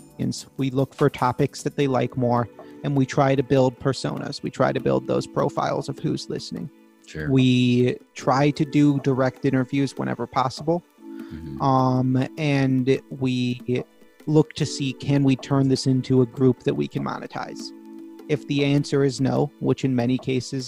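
Nothing goes wrong anywhere in this recording; it just runs along without a single glitch worth pointing out.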